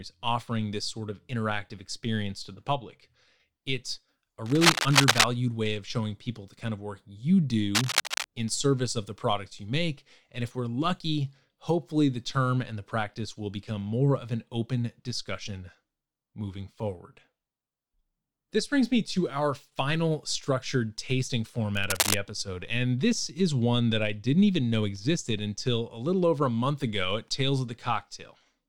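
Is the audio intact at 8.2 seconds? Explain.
No, cable scratch noise runs from 7.75 to 8.26 s, covering 8.2 s. A worn cable or connector being moved likely made its contact resistance jump rapidly, adding dense, uneven bursts of scratching and rustling roughly as loud as the speech itself.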